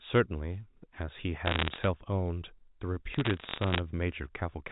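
Telephone speech, carried over a G.711 mu-law line at 64 kbps, so nothing above 4 kHz comes through. Two bursts of bit errors on a digital phone line break in, from 1.46 to 1.87 s and from 3.12 to 3.79 s. Each burst is a spray of sharp ticks and crackle over the speech. Flipped bits corrupt single samples. The sound points to an error rate of a fraction of a percent, with the later burst slightly denser.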